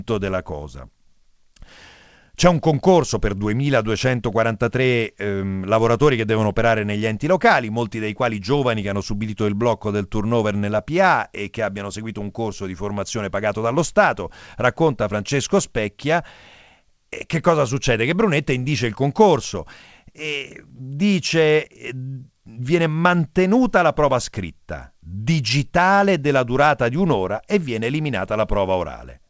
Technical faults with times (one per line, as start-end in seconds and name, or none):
none